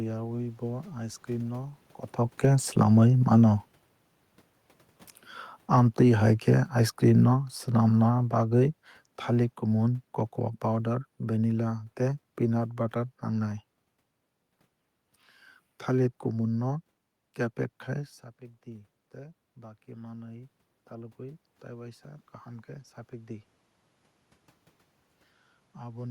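Speech, with automatic gain falling from 5.58 to 10.11 s: the gain control, reacting to loud or noisy input, lowers its level by about 8 dB, so voice and room noise sink together.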